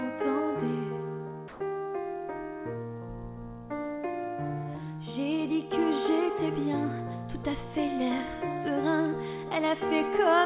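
Audio carried over a narrowband call path with nothing above 4 kHz, consistent with G.711 mu-law. From 1.48 to 1.6 s, roughly 110 ms of sound gives way to steady comfort noise, likely sound dropped by the voice detector after it misjudged the signal as background.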